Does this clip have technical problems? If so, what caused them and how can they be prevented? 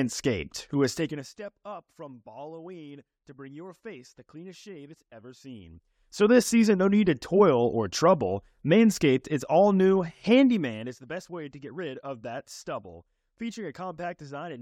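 No, nothing in this speech recording points to a technical fault, so there is no cause to trace and nothing to prevent.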